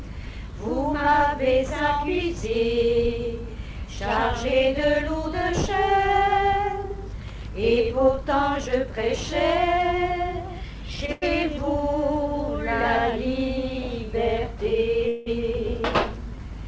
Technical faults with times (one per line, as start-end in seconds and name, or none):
11.06-11.24 short stall from a late packet
15.08-15.28 call audio freeze